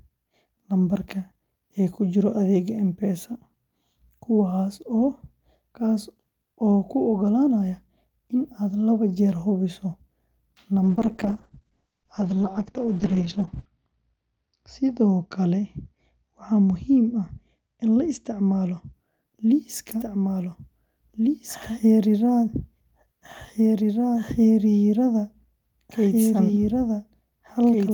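From 10.84 s to 18.99 s the speech turns rough and muffled, its top end cut from 20 kHz to 8 kHz. This is a call bitrate drop: the encoder fell from 32 kbps to 8 kbps, staying at its lowest for 2.82 s, before recovering. From 19.92 s to the end, the speech is heard twice. A second full-band copy, at about the same level, trails roughly two seconds behind and has no room colour. This is a doubled audio track, likely from a second, slower capture path.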